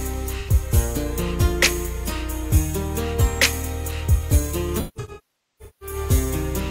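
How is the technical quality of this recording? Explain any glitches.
The recording is marred by AAC frame loss with concealment, heard twice. Around 0.39 to 0.50 s, about 85 ms of data goes missing, consistent with two lost frames, and the decoder patches the gap by reusing the last good spectrum, leaving a brief smeared, phasey patch. From 4.79 to 5.96 s, roughly 0.9 s of losses scatter across about a second, the longest run near half a second. There the patched sound decays toward silence and fades back in. A spectrogram would show blurred, repeated-looking bands, then a fading hole, and the waveform's envelope dips.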